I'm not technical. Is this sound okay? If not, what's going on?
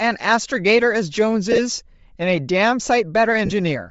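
No. Throughout, the speech has a breathy, grainy edge, with the upper treble thinned and replaced by hiss that moves with the voice, not steady background noise. This is likely Bluetooth LC3 compression.

At 1.52–1.59 s and 3.45–3.52 s, lost LE Audio frames turn the voice into a brief noisy smear rather than a clean silent gap, so it sounds blurred, not cut out.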